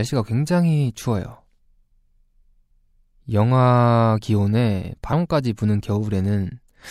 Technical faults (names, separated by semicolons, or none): compressed frames skipped